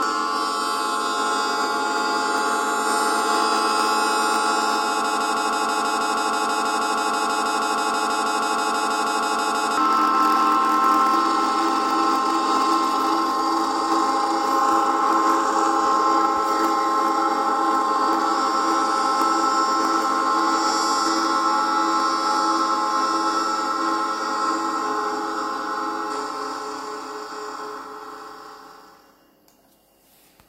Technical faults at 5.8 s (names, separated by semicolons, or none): broken-record loop